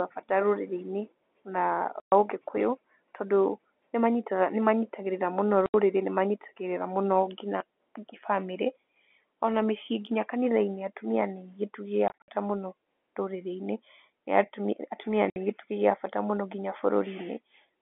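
Packet loss filled with silence: packets were lost and the receiver plays nothing in their place, so this telephone-band speech is cut by gaps at 2.0–2.12 s (before "ũgĩkũyũ tondũ"), 5.66–5.74 s (after "manyitagĩrĩra mũno"), 12.08–12.28 s (scattered, runs up to 60 ms) and 15.3–15.36 s (before "gĩtugĩ gĩa bata mũno"). The gap lengths fit 20 ms packets.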